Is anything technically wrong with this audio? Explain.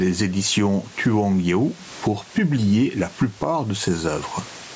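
Yes, there's gain pumping running through the whole clip. The room noise sits about 33 dB under the speech, and the level swings by something like 15 dB. The likely cause is microphone gain set way too high, with a fast limiter or compressor clamping down on every loud syllable. That leaves loud and quiet passages squashed close together.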